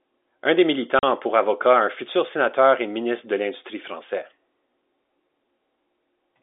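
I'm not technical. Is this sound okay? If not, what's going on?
No. At 0.99 s, just before "a pour avocat", the speech cuts out for 40 ms. This is packet loss filled with silence: pieces of the call went missing and were replaced by dead quiet, likely four 10 ms packets. Unlike a patched-over gap, it has hard edges.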